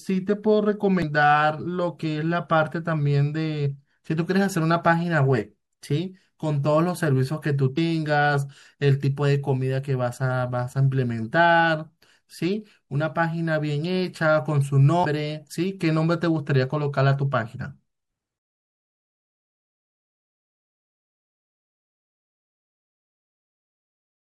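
Throughout the recording the speech has a watery, swirling quality, with sibilants turning metallic and chirpy. That texture is likely due to MP3 compression, and the level of damage fits a low bitrate of around 64 kbps. Short of bits, the encoder has dropped weaker frequency components, which flicker in and out from one frame to the next.

Three brief disruptions break through at 1.00 to 1.04 s, 7.74 to 7.78 s and 15.01 to 15.05 s, each a 40 ms blip or squawk. These come from damaged data in a compressed stream. Corrupted bytes made the decoder misread or reject the frames there, lose sync and hunt for the next valid frame header, producing the momentary garbled burst.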